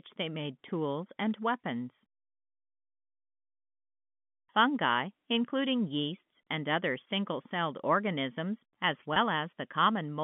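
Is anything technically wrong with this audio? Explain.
Yes. At 9.14 to 9.16 s, just after "single celled organisms as", there is packet loss with pitch repetition. About 20 ms of audio went missing, which fits a single lost packet, and the receiver filled the gap by repeating the last pitch period. The result is a brief held, slightly buzzy tone in place of the lost sound. On a waveform, the gap shows as a run of identical repeated cycles. On a spectrogram, the harmonics stay flat and unchanged for that instant. All of this sits within the telephone band of the G.711 A-law line.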